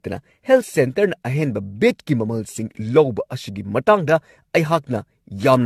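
Throughout the speech, the sound is swirly, smeared and hollow, with blurred attacks and a build-up of noise and spectral gaps. The cause is likely generation loss. The audio appears to have been re-encoded around seven times, which fits a 64 kbit/s AAC-LC chain, with each pass quantising afresh on a shifted frame grid.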